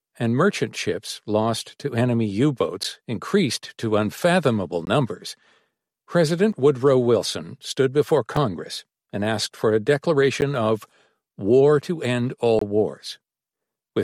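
The output buffer likely went unfilled six times, leaving blocks of digital silence at 2.83, 4.85, 6.53, 8.37 and 10.41 s and from 12.59 to 12.61 s. They last 6 to 23 ms, five of them fitting 256-, 512- and 1024-sample buffers. Each cut is abrupt, the longest leaving a brief hole.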